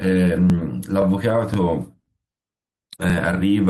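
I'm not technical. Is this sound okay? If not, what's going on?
No. The speech has overlapping chunks: it was handled in half-second pieces that overlap slightly, so about 20 ms replays at each join, heard as small stutters at 0.50, 1.02, 1.54, 2.06, 2.58 and 3.10 s. At 0.89 s there is also a lost packet rebuilt from error correction: a 20 ms piece went missing and was filled from a rougher backup copy, so that instant sounds briefly grainy rather than silent.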